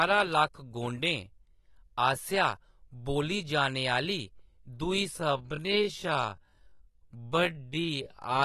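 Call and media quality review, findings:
AAC compression, throughout: dull, smeared speech, likely low-bitrate AAC-LC near 37 kbps. Spectrogram shows flat cutoff and patchy high-band holes.

Time-stretched section, 5.15 s to end at 8.44 s: pace drops to 0.58x, pitch unchanged, speech drags. Likely segment-repeating stretch. Waveform shows duplicated segments.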